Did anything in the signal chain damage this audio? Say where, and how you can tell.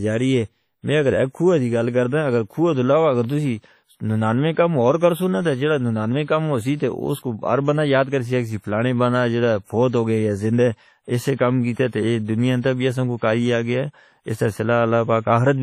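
Yes, at the codec stage, throughout. The audio is washy and ringing, with hiss that breathes with the signal and nothing above 15 kHz. This is likely WMA compression near 32 kbps: long transform blocks smear quantisation noise, and weak spectral lines are zeroed.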